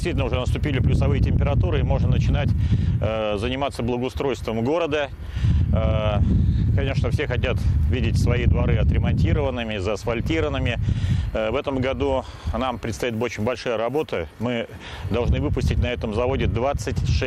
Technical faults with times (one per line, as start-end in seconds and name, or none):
none